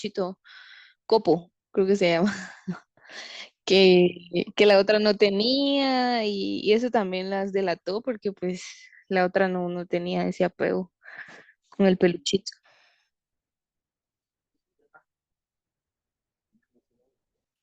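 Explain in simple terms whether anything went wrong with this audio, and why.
Nothing went wrong; no faults can be heard.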